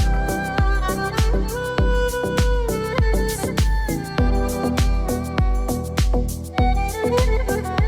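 No technical faults can be heard anywhere in the audio.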